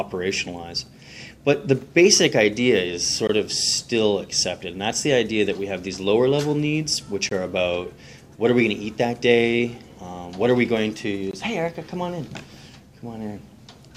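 Short silent holes with hard edges break the audio at 3.27, 7.29 and 11.31 s. Each lasts 20 ms and they recur every 4.0 s. This is a gap between chunks: the audio arrives in 4-second pieces, and silence sits at each join.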